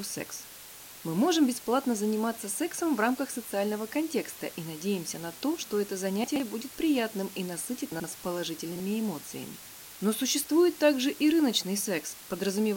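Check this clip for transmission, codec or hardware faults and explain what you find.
Two faults are present. Throughout the clip there's low bit depth with dither: a steady, even hiss only roughly 15 dB below the speech, which fits about 6-bit resolution with dither randomising the rounding error.

Chunks out of order appear at 6.24–6.4 s, 7.92–8.04 s and 8.72–8.8 s. A 40 ms chunk plays late, by about 120, 80 and 40 ms respectively. Each spot sounds jumbled.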